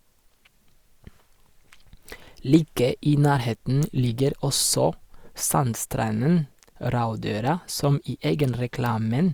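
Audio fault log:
No faults to log for this clip.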